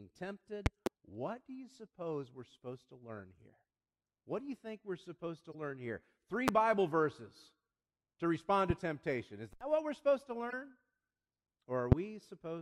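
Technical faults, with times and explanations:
0.66–0.89, 6.48–6.51, 8.70–8.73 (just after "to respond") and 11.92–11.95 s, loud pop: a double pop in the first span, then single sharp thumps, peaking roughly 15 to 25 dB above the speech, which carries on underneath. A sudden voltage step or pulse, likely from a plug, switch, static or driver glitch, is shaped by the downstream circuitry into a brief jolt. On the waveform each appears as a tall spike towering over the speech, and on the spectrogram as a thin vertical stripe running from the low end to the top.
3.17–3.20, 5.52–5.55 (between "think we're supposed to" and "learn here") and 10.50–10.53 s, corrupt frame decoded: short chirpy blips, each lasting about one or two codec frames, around -40 dBFS at the first two and nearer -30 dBFS at the last. Flipped bits inside compressed frames led the decoder to apply wrong gains or misread codes, so energy lands at frequencies the speech doesn't hold. 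On the spectrogram these show as small, sharply bounded blocks or smears of misplaced energy. The waveform shows only a slight, brief disturbance.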